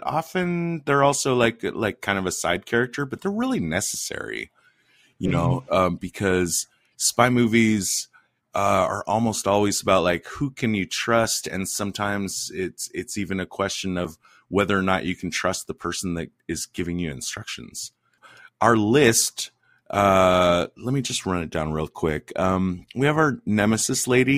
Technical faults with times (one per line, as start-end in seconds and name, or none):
3.95 dropped buffer (overrun)
14.05 dropped buffer (overrun)